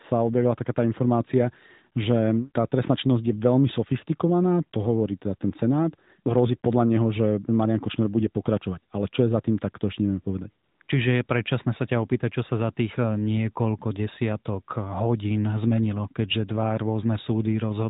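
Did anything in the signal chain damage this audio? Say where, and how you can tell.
Yes. AMR comfort noise appears at 10.64 to 10.80 s and again at 10.82 to 10.88 s, on top of the AMR-NB narrowband coding. The codec's silence detection stopped sending frames, so the receiver filled those gaps with smooth synthetic noise that switches abruptly in and out.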